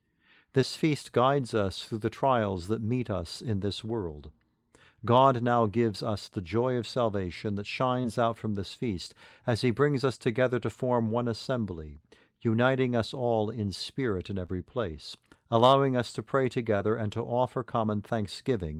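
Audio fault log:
0.61–0.64, 6.26–6.30, 8.02–8.06, 8.74–8.78, 14.46–14.50, 16.78–16.82 s, short concealed packet loss: about 20 ms of speech arrived too late each time. The decoder stretched the preceding sound across the hole and blended back, leaving a brief smear or wobble rather than the hard silent gap of an unconcealed dropout.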